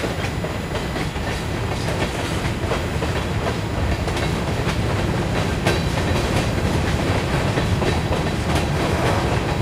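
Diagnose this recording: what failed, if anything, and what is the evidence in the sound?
A USB whine, which points to the analogue wiring, runs through the whole recording: a fixed tone at 1 kHz, strongest at its 2 kHz harmonic, roughly 25 dB below the sound. The USB bus's 1 ms frame current leaks in through power or ground. Mains hum would sit at 50 or 60 Hz instead.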